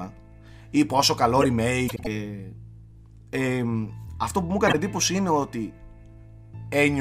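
Between 1.88 and 2.07 s, two adjacent blocks of about 78 ms each play in swapped order, a case of frames out of order: the decoder received the later block first, which fits runs of three frames. The result is a brief garbled flutter. At 4.67 to 4.75 s the same swap recurs with blocks of about 26 ms, consistent with single frames, giving a shorter stutter. No time is lost in either case.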